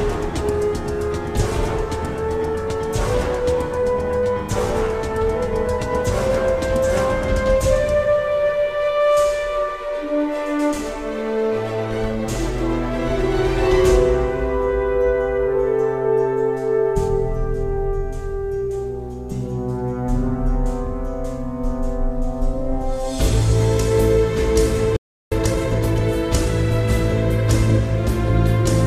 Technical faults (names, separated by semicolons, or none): playback stall; time-compressed catch-up